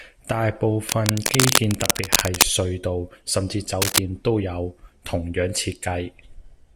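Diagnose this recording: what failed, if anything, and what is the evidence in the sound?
Cable scratch noise in the analogue wiring: rustly bursts from 0.87 to 2.43 s at about speech level and 3.82 to 3.98 s about 5 dB above it, likely a worn connector shifting contact.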